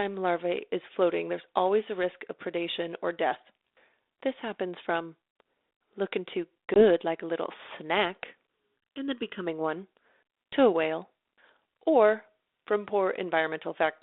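At 6.74 s the speech drops out in a sharp-edged hole of about 20 ms, then comes back with some roughness that clears by 6.84 s. This is packet loss on an ADPCM call, which fits a single lost packet filled with silence. The G.726 decoder, running at 32 kbit/s over a 300 Hz to 3.7 kHz line, loses track of the sender's adaptive predictor and step size, so it needs a few tens of milliseconds to fall back into step.

From 8.47 s to 9.47 s the sound turns hollow and phasey, as if heard through a tube, with a dull, scooped tone that stays fixed. This is channel delay producing comb filtering. One channel lags the other by under a millisecond, and the two are summed to mono. Content common to both cancels at evenly spaced frequencies, starting near 700 Hz and repeating at intervals of roughly twice that up the band.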